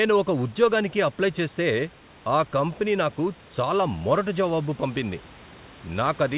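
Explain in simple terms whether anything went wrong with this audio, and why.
Listening through the speech, nothing stood out as having gone wrong.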